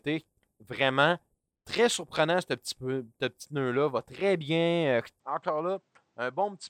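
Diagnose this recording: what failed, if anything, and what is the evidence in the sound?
Input switched to a poorer device at 5.2 s, likely at the driver: nothing above 8.7 kHz, about 10 dB quieter, faint new noise, no gap.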